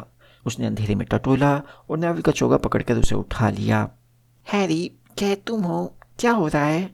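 A speech recording with one fault: a phantom power thump from 3.04 to 3.28 s. It peaks near -5 dBFS and decays within about 56 ms. It likely comes from a supply switching on a live input.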